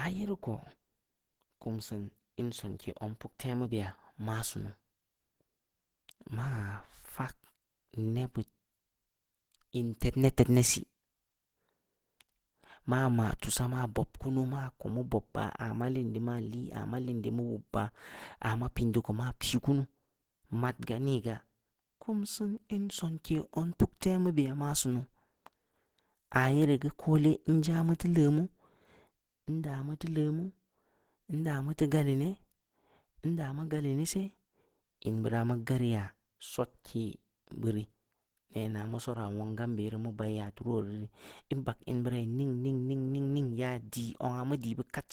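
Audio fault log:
throughout Opus compression. The speech has plainly audible codec damage across the whole clip. It sounds hoarse and grainy rather than swirly. The top end still reaches about 20.2 kHz, so the bandwidth has not narrowed. The likely cause is Opus in its hybrid mode at a low rate, which fits roughly 16 kbps. The lower band is coded as speech, while the upper bands are filled in coarsely with noise.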